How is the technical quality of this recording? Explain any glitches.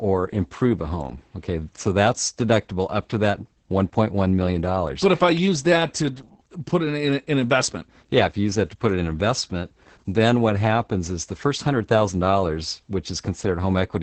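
The recording is technically poor, with heavy low-bitrate voice coding degrading the speech from start to finish.

Opus voice compression, throughout the clip: the speech goes through a linear-prediction voice coder that models the vocal tract and approximates the excitation with very few bits. The sound fits roughly 10 kbps in SILK wideband mode. Nothing above about 8.9 kHz survives, so the speech sounds muffled, and the coarse excitation makes it hoarse and slightly robotic.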